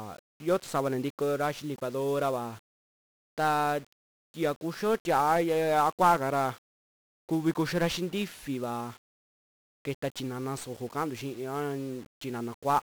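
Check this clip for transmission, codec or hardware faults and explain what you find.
The speech carries one codec fault from start to finish: heavy 1-bit DFPWM compression. Each sample is coded as a single up-or-down step to an adaptive level that tracks the waveform, so the error between steps becomes dense broadband noise, which fits a bitrate of around 48 kbps. The result is fuzzy, crackly speech with the treble sunk in hiss. Unlike a low-bitrate perceptual codec, there is no band-limiting or swirly warble, only grain that rides with the signal.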